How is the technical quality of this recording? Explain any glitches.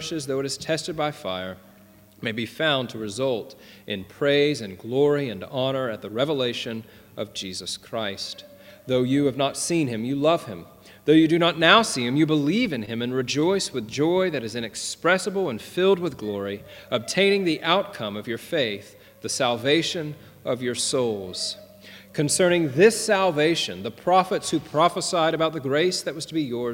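There is one glitch, a short stall from a late packet at 12.85 to 12.90 s. A packet arrived late and the jitter buffer ran dry, so the receiver stretched the last sound by about 20 ms, then resumed where it stopped. Nothing is lost, but the sound hangs briefly, with a slight buzz or dip, and everything after it runs 20 ms later.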